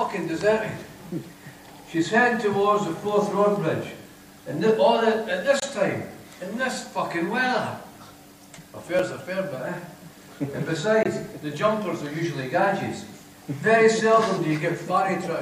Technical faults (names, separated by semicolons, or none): block of digital silence; corrupt frame muted